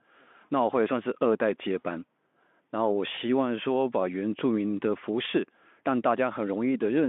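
At 3.15 to 3.18 s there is VoIP packet loss concealed by the speech codec. About 20 ms of speech went missing, which fits one lost packet. The Speex decoder bridged the gap by repeating its last pitch and filter at falling gain. The speech is briefly stretched into a buzzy tone or a coloured noise that fades, then recovers.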